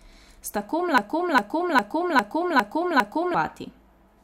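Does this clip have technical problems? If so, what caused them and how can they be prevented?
Yes. From 0.98 to 3.35 s there's a broken-record loop: a 0.40 s fragment of speech repeats six times back to back, and whatever should have played then is lost. Likely a stalled player or stream resending its last buffer. Set playback to output silence on a stall rather than replaying stale buffers.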